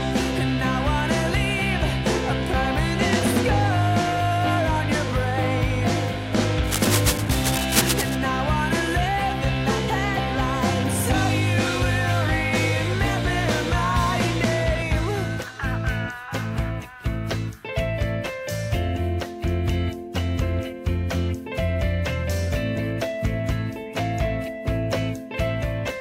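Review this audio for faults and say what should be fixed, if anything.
From 6.64 to 8.15 s there's cable scratch noise: uneven crackle just below the sound's level, likely a worn lead or connector shifting. Swap or reseat that cable and keep it still during takes.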